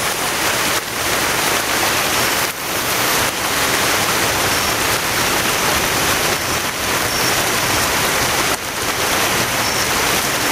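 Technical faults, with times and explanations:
Throughout, gain pumping: the level ducks by around 10 dB under every loud sound, flattening the dynamics. The likely cause is excessive input gain with a fast limiter grabbing peaks. Unlike a noise gate, the level rides down and back up rather than cutting off.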